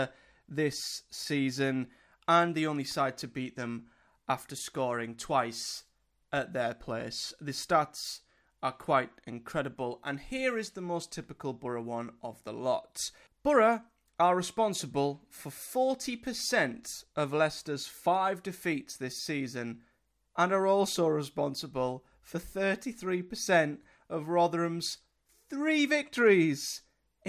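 Nothing in this speech recording stands out as a technical problem; it just runs along without a hitch.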